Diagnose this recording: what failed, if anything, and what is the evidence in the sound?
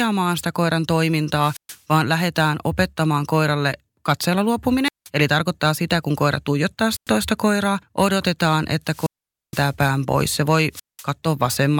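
Wireless microphone squelch dropout in the analogue radio link: the fading FM signal tripped the receiver's squelch, leaving hiss-edged silences at 1.38, 4.84, 6.89, 8.86 (longest, 0.47 s) and 10.72 s.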